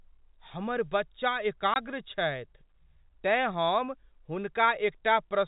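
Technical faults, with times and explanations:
1.74–1.76 s, packet loss filled with silence: the speech drops out completely for 20 ms, which fits a single lost 20 ms packet. Instead of concealing the gap, the receiver inserted digital silence, so the waveform steps abruptly to zero and back. The clip is band-limited by G.711 telephone coding, with nothing above 4 kHz.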